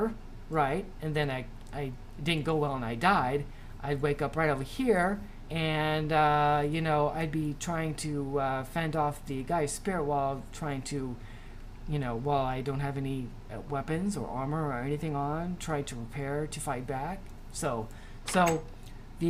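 Nothing stood out as a technical fault on listening through this recording.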